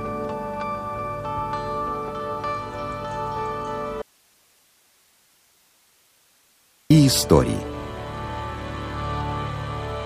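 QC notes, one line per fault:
4.02–6.90 s: audio dropout to a faint residue. The sound cuts off abruptly mid-flow and returns just as suddenly after about 2.88 s, leaving only low hiss roughly 40 dB below the normal level. The likely cause is the wanted signal being lost upstream while the rest of the path stayed live, so its noise floor carried on. A true mute or digital gap would fall to silence, and a natural pause or fade would not switch so sharply.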